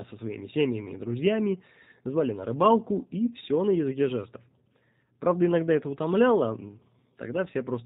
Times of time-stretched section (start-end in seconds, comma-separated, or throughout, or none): none